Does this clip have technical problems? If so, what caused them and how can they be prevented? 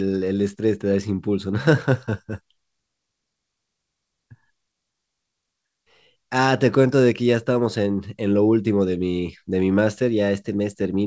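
No, this speech clip has no technical problems. It has gone through a WebRTC call path whose codec removes everything above 8 kHz, which fits G.722.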